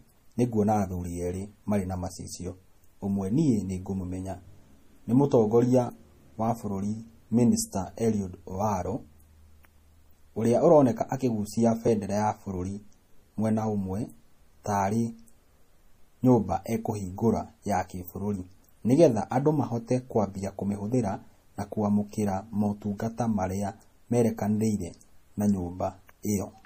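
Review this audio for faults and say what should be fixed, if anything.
The speech carries plainly audible codec damage throughout, with nothing above 15.3 kHz, which is likely MP3 compression at a low bitrate around 40 kbps. Short of bits, the encoder drops weak frequency lines frame to frame and cuts the treble, giving a watery, swirly texture. Prevent it by keeping the source lossless or encoding at a much higher bitrate.

At 11.88 s the sound skips, with roughly 20 ms gone and the two sides butted together. This is likely audio missing between chunks: a piece lost while one block closed and the next opened, which fits 6-second chunks. Prevent it by overlapping or double-buffering chunk boundaries so no samples fall between blocks.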